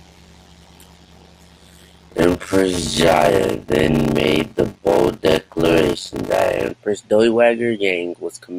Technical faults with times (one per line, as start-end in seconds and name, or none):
0.00-6.71 block size mismatch (padded)